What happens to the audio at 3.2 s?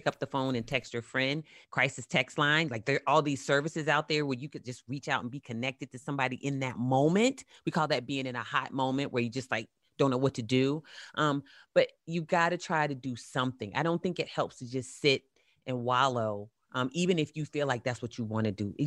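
Nothing goes wrong at 3.2 s; the speech carries on intact through that moment, with no dropout, click or distortion.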